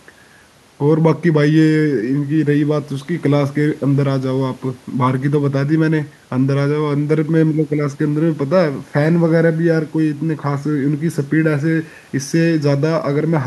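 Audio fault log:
No faults heard.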